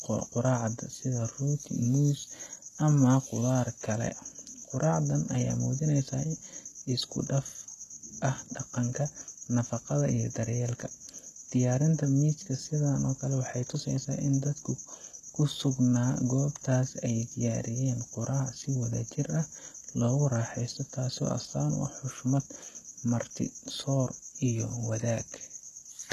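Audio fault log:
Throughout, HE-AAC compression, likely at a low bitrate around 16 kbps: treble above 12.3 kHz is absent, and rebuilt upper bands make s sounds gritty and metallic rather than simply dull.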